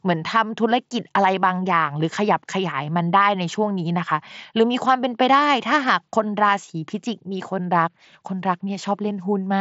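No technical faults can be heard anywhere in this speech recording. It arrives through a Bluetooth mSBC headset link at about 61 kbps, so nothing sounds above roughly 7.7 kHz, and there is a light grainy texture on the louder syllables.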